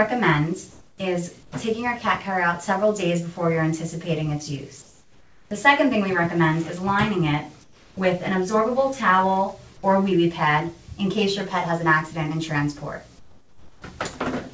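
Comfort noise in place of the background fills the pauses at 0.71–0.98 s, 1.43–1.52 s, 4.82–5.51 s, 7.64–7.97 s and 13.19–13.82 s. In each gap the real background gives way to a flat, featureless hiss about 1 to 8 dB quieter, with the largest drop at 13.19 s. The likely cause is discontinuous transmission, where the receiver synthesises noise while the sender is silent. An onset clipped by the voice detector follows at 7.95 s, where the sound starts abruptly and loses its soft beginning. The detector likely reacted about 20 ms late, so that opening slice was replaced by comfort noise. The call codec's band limit is audible throughout, with nothing above 8 kHz.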